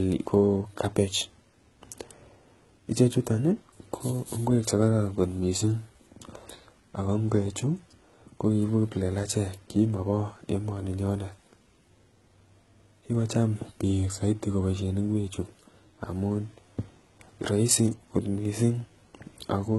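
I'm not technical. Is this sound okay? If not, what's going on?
No. Throughout the recording, the speech shows heavy damage of the kind left by HE-AAC compression, which is likely the cause. To save space, this method stores only the lower part of the sound properly and then fakes the treble by copying lower parts upward. That fake treble doesn't quite match the real voice, so s sounds come out gritty, lispy or metallic. Nothing at all remains above about 11.8 kHz.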